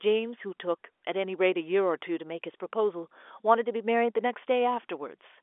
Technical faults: none

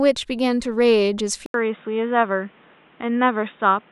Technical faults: input switched to a poorer device

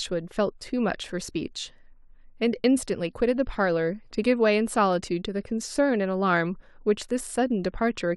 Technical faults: none

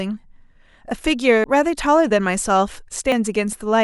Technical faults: dropped buffer (overrun)

